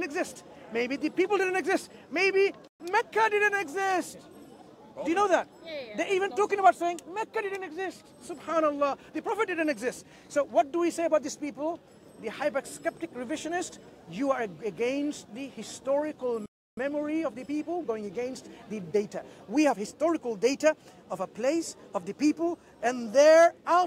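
The audio has two playback stalls. It goes silent from 2.68 to 2.80 s, a gap of 120 ms, and again from 16.46 to 16.77 s, about 313 ms. Each time the sound breaks off mid-flow, likely because the player ran short of data or its thread was blocked. Each stall is followed by time-compressed catch-up. From 2.80 to 3.04 s the audio runs 1.5 times fast. From 16.77 to 19.77 s it runs 1.1 times fast. Pitch stays normal, but small cross-faded cuts give a hurried feel.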